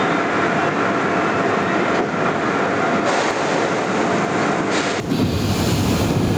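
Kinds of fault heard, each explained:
Gain pumping: The input gain was likely set far too high, so a fast limiter keeps clamping down on each loud sound and releasing after it. The gain swings by around 10 dB, and the dynamics sound flattened throughout.
Input switched to a poorer device: The recording likely ran through a lesser input from the start until 5.0 s, then changed back. Before the switch nothing reaches above 8.4 kHz and the sound is duller, with faint extra noise. At 5.0 s it opens up and the level shifts by about 5 dB, with no gap.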